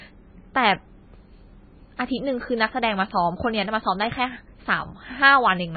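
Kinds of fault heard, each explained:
MP3 compression: The speech was likely pushed through an MP3 encoder starved of bits, which fits a bitrate near 18 kbps. It discarded everything above 4.6 kHz and dropped weak frequency lines, leaving heavily damaged, muffled speech with a watery, swirling texture throughout.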